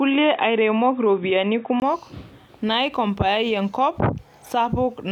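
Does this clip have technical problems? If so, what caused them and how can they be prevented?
Yes. From 0.0 to 1.82 s the speech is dull and boxy, with nothing above 3.8 kHz. A 20 ms gap at 1.82 s precedes fuller sound, about 5 dB different in level. The likely cause is an input switched to a poorer device. Fix the input device before recording and disable automatic switching.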